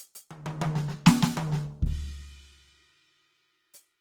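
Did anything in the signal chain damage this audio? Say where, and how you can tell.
Yes, at the codec stage: the music is grainy and rough throughout, consistent with likely Opus compression in its CELT music mode. Sustained tones sound noisy rather than swirling, and the damage is plainly audible, which fits a low rate around 24 kbps. On a spectrogram the bands stay filled, with content up to about 20.2 kHz, but upper harmonics dissolve into speckled noise where the encoder folded or noise-filled bands instead of leaving holes.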